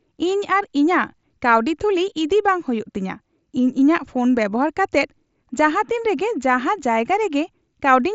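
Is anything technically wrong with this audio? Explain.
No, nothing technically wrong stood out on listening to this speech clip.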